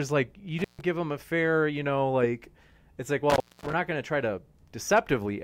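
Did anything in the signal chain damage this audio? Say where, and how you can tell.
Yes, an intermittent contact in the analogue wiring, a loose cable or plug. The speech cuts out after "like you" (0.59 to 0.81 s, open about 145 ms) and again after "know like it's like" (3.30 to 3.73 s, open about 233 ms), resuming at "give him a fair" and "not going to try". Each gap has crackle at its edges and faint hiss while the line is open. A codec or network dropout would not leave analogue crackle and hiss like this.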